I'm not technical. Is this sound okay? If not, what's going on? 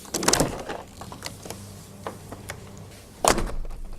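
Yes, it's fine: nothing stood out as wrong when listening to this sound.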